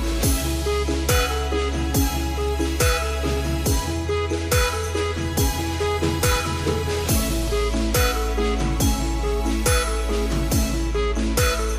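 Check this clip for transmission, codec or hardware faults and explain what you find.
One processing fault is present. From 4.74 to 7.57 s, a filter restarted on every block resets its state, so each block starts with a small transient, producing a 21.5 Hz buzz that tracks signal level and fits a 2048-sample block.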